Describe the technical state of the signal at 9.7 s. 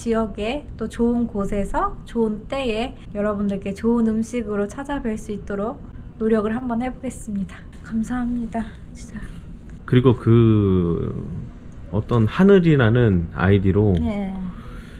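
At 9.7 s the audio is just leaving a jitter buffer slow-down that runs from 7.92 to 9.66 s. The receiver repeated single pitch periods to rebuild its reserve, adding 120 ms. Playback drops to 93% speed at unchanged pitch, so sounds stretch.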